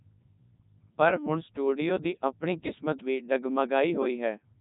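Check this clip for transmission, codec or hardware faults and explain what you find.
The speech has passed through a Codec 2 vocoder for its whole length, and at 3.2 kbit/s the damage is heavy. Rather than keeping the waveform, the coder reduces each frame to pitch, voicing, energy and a spectral envelope, and the decoder rebuilds the voice from sine waves. The result sounds robotic and buzzy. A spectrogram shows rigid, evenly spaced harmonic lines with nothing above 3.8 kHz, and the waveform no longer matches the shape of natural speech.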